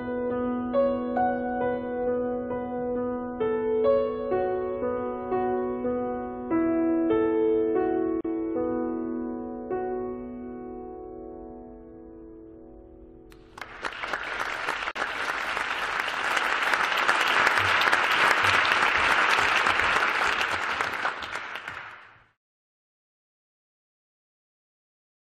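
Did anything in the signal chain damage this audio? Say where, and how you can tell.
Yes: a gap at a join of encoded pieces at 8.21 s (about 37 ms) and 14.91 s (about 44 ms). The sound drops out into a short silence with smeared edges, then resumes exactly where it left off. This is the codec stage: separately encoded pieces were joined untrimmed, keeping each run's start-up delay and last-frame padding.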